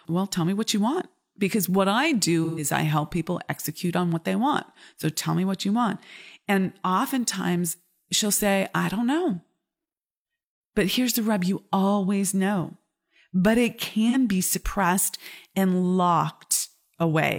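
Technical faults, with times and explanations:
2.44–2.64 s, AAC frame loss with concealment: after "want because what I", roughly 128 ms (about three lost frames) is rebuilt from the last good spectrum, giving a smeared, phasey patch rather than a silent gap.
14.09–14.15 s, AAC frame loss with concealment: after "always know but it", about 43 ms (likely one frame) is filled with a brief noisy smear, not a click or hard dropout, before "be suppressed and".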